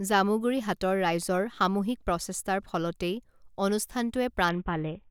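At 4.49 s a Bluetooth SBC bit pool drop sets in and lasts to the end of the speech at 5.11 s. The sending device cut the SBC bit pool sharply to keep a congested link alive. The dulled, grainy result fits a fall from about 28 to about 6, near 60 kbps. Starved of bits, the upper sub-bands get few or no bits and the remaining bands are coarsely quantised, so the treble collapses into muffled, gritty noise. A spectrogram shows the high frequencies cut off abruptly at 4.49 s, with speckled noise filling the lower bands.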